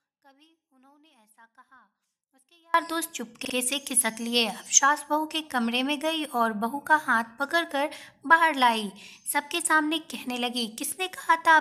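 Audio dropout to a faint residue runs from the start to 2.74 s: the signal is likely lost upstream, leaving only a faint residue about 35 dB down before it returns abruptly.

Repeated frames occur at 3.44 to 3.53 s, where a 46.4 ms block plays twice more, adding 92.9 ms of stutter. At 10.87 to 10.89 s, a single 23.2 ms frame repeats once, producing a brief stutter.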